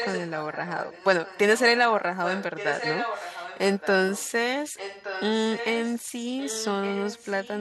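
Echo leak runs through the clip at 0.00 to 0.31, 0.52 to 1.06, 1.25 to 1.39, 2.24 to 3.88, 4.11 to 4.32, 4.63 to 5.97 and 6.39 to 7.61 s. A delayed copy of the speech returns about 1.17 s late, likely from a far-end loudspeaker whose echo canceller let part of the sound back through. The copy is loudest, only about 5 dB below the speech, at the start and from 2.24 s, and fainter, about 20 dB down, in the short bursts.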